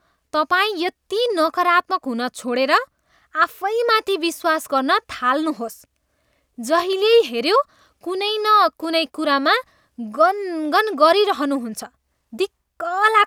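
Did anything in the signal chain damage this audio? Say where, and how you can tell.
No, nothing along the chain seems to have touched this speech recording, and there's no point in it where any stage can be heard leaving a mark.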